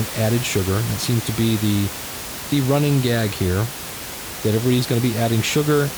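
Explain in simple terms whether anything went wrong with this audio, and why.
Nothing went wrong in this speech recording; the background sound is the room the microphone was in, not a system problem.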